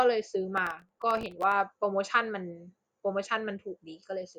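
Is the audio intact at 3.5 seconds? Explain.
Yes, the speech is intact at 3.5 seconds, with no dropout, click, distortion or other fault at that point.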